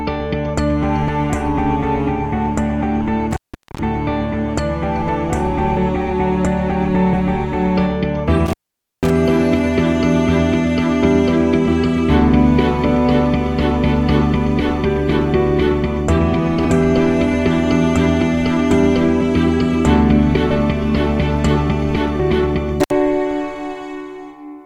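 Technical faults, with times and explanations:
3.31–3.79 s, 8.46–9.10 s and 22.80–22.91 s, intermittent contact: the sound drops out for about 430 ms, 500 ms and a short 66 ms. Each gap has crackle at its edges, where a loose plug or cable briefly lost connection and then touched again. While the line is open, the signal is gone and only faint hiss is left.
5.76, 7.12, 11.67, 16.64, 20.50 and 22.19 s, compressed frames skipped: the audio suddenly jumps forward. Frames that went missing or were rejected by the decoder as damaged never got played. The frame length works out to 21.3 ms, which fits something like a 1024-sample frame. Three of the jumps lose around 150 ms, the one at 11.67 s about 200 ms, and the last two roughly 400 ms and 700 ms.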